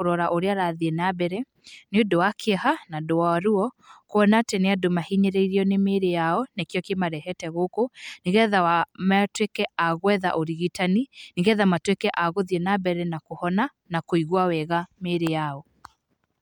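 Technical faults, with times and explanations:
No technical faults can be heard anywhere in this speech recording. There is nothing to list with a time.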